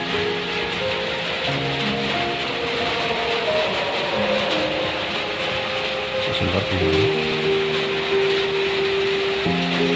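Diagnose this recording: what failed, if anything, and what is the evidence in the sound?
Nothing stood out on listening that would point to a failure at any stage of the chain.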